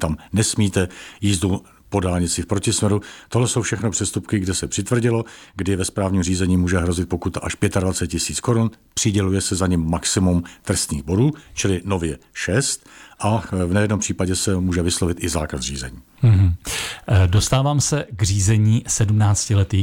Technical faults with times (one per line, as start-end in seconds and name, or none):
none